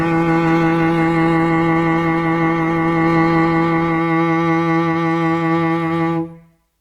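For the first 4.0 s the music sounds dull and smeared, with the treble missing or replaced by a thin, synthetic sheen and stronger codec artefacts. At 4.0 s the quality jumps up abruptly with no gap, and the top end then reaches about 20.1 kHz. This is an adaptive stream starting at a low bitrate: the player opened on a heavily compressed version, consistent with roughly 16 kbit/s Opus, and switched to a better one, around 64 kbit/s, once it had gauged the connection.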